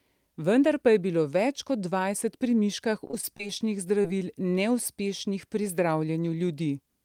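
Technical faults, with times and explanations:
3.07–3.51 s, repeated packet loss (robotic sound): Just after "pri miškah", the speech turns choppy and machine-like. Five separate gaps hit this stretch, about 80 ms of audio in total. The longest is 23 ms. Each time, the receiver stretches the last sound to cover the hole, filling about 93 ms. Then the next gap arrives. About a fifth of the span is patched sound rather than real speech. That rapid patching gives the robotic texture.
4.02–4.20 s, short concealed packet loss: About 20 ms of speech never arrived in time. The receiver covered the hole by continuing the sound just before it, following its pitch where the speech was voiced. It then blended back into the real audio. The patch runs slightly long, adding roughly 10 ms. The result is a brief smear or wobble rather than a clean gap, and a short consonant here may be lost.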